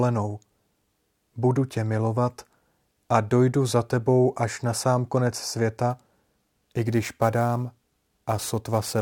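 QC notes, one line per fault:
5.90–9.01 s, sample clock jitter: after "až na sám konec" the converter clock wanders by roughly 10 microseconds, so samples land early or late. The error, about 20 dB below the signal, follows waveform slope and roughens loud, bright speech with hiss.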